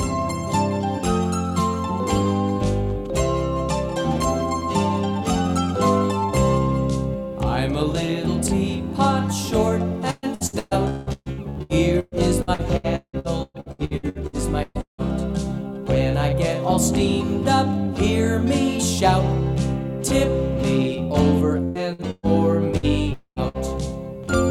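From 10.11 to 15.01 s, repeated packet loss (robotic sound) chops the audio: lost or late packets are patched by extending the previous sound, with gaps up to about 177 ms covering 44% of the span. It sounds choppy, with pieces missing. A spectrogram shows smeared, repeated harmonic stripes, and the waveform shows a ragged envelope. A shorter spell returns from 21.63 to 22.86 s, with gaps up to 124 ms.

At 23.13 to 23.39 s the audio turns into a fading buzz or hiss lasting roughly a quarter second, then about 80 ms of silence. This is likely a long network dropout, with the lost material never played. The waveform decays to a flat line, and the spectrogram goes blank.

A burst of packet loss at 23.48 to 23.57 s removes about 60 ms. The last sound is held and dimmed briefly before the audio jumps ahead. It appears as a short, flattened, fading smear on the spectrogram.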